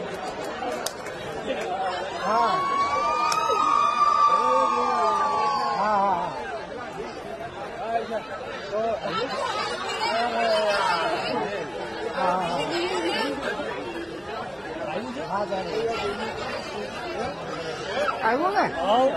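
No technical faults can be heard anywhere in the audio.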